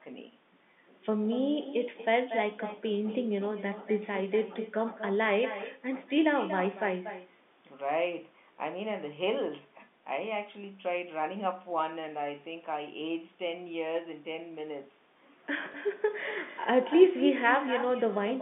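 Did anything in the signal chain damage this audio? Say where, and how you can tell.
Yes. Echo with no canceller runs through the whole clip and belongs to the call-processing stage at the far end. Every phrase is trailed by a quieter, thinner copy about 12 dB down, arriving roughly a fifth of a second later. That delay fits a network round trip. The far end's loudspeaker fed its microphone, and no echo canceller subtracted that path before the signal came back over the line.

Packet loss with the last packet repeated is a network fault heard at 15.72 to 15.74 s. A 20 ms stretch is replaced by a repeat of the audio just before it, which points to a single lost packet of the usual 20 ms size. The receiver's concealment replayed that packet, which is heard as a small blip. The G.711 A-law telephone band of about 200 Hz to 3.6 kHz is audible underneath both faults.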